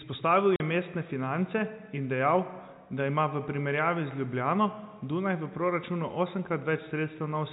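At 0.56 s the speech drops out completely for 40 ms, until 0.60 s. That's packet loss filled with silence: a stretch of the stream never arrived, and the receiver simply played nothing in its place. The gap length fits two consecutive 20 ms packets going missing. Because the audio is cut off and restarted abruptly rather than faded, the hole has hard edges, under the narrow telephone band of the G.711 coding.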